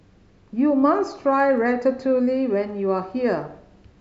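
From about 0.18 s to 3.94 s there's a run of clock slip clicks, faint ticks roughly every tenth of a second, each a single-sample jump. Likely two devices on unsynced clocks drifting apart by around 300 ppm, dropping or repeating a sample whenever the gap hits one.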